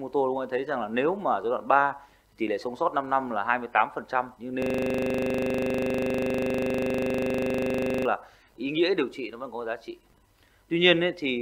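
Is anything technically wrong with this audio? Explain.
Yes. From 4.62 to 8.05 s there is a system hang loop. The system froze while the sound hardware kept replaying its buffer. One 40 ms slice repeats about 86 times. It is heard as a rough, steady buzz at 25 Hz.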